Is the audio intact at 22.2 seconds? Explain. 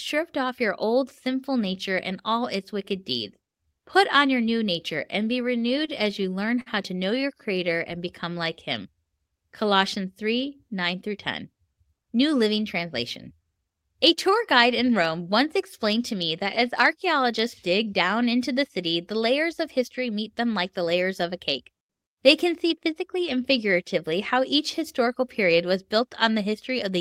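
Yes, at 22.2 seconds the speech plays through intact, with no dropout, click, distortion or other fault to be heard at that moment.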